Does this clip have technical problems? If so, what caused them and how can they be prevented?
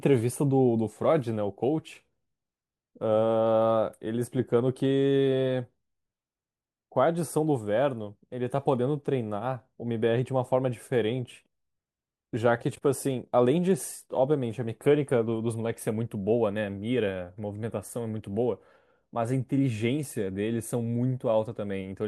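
No, nothing in this speech recording stood out as a technical problem on listening, so there is no cause to trace and nothing that needs preventing.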